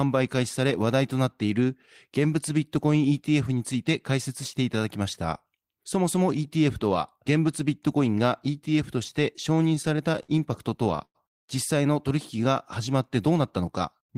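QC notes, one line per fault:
9.55–10.32 s and 10.71–11.18 s, repeated stalls (stutter): The audio drags in two bursts. The first has nine brief holds totalling 131 ms, the longest 54 ms, covering 17% of that stretch. The second has five holds totalling 141 ms, the longest 100 ms, covering 30%. Packets arrived late, so the jitter buffer kept running dry, and the receiver extended the last sound until new audio arrived. Nothing is lost, but the flow halts and restarts.
13.32–14.12 s, jitter buffer speed-up: Playback runs at about 106% speed with pitch unchanged, so the audio sounds slightly hurried. The buffer held more audio than its target, as when delayed packets arrive together. The receiver trimmed short pitch-period-length pieces repeatedly, removing around 50 ms in total to bring the delay back down.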